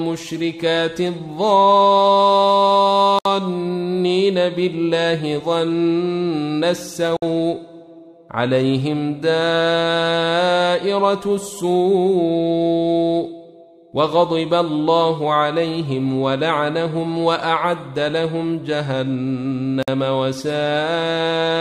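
Three gaps at a join of encoded pieces break the continuous sound: 3.19 to 3.25 s (about 66 ms), 7.17 to 7.22 s (about 57 ms), and 19.83 to 19.88 s (about 52 ms). Each piece was encoded separately, and the encoder's start-up silence and final-frame padding were left in where the pieces were joined. Each gap is a short dropout with softened edges. The sound then resumes from exactly where it stopped. On a waveform it shows as a flat stretch, and on a spectrogram as a thin vertical blank band.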